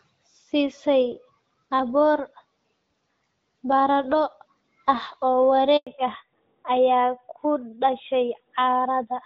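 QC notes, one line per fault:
5.77 to 5.87 s: handover gap. The call switched networks and no speech frames arrived for about 100 ms, so the sound drops out abruptly and stays silent until the new link picks up. Whatever was said in that window is lost, not just muted.
5.87 s to end: fallback to narrowband. Right after the gap the call drops from HD Voice at 12.65 kbit/s to narrowband AMR at 12.2 kbit/s. Nothing remains above 4 kHz, so the speech turns duller and rougher for the remainder, losing its earlier clarity.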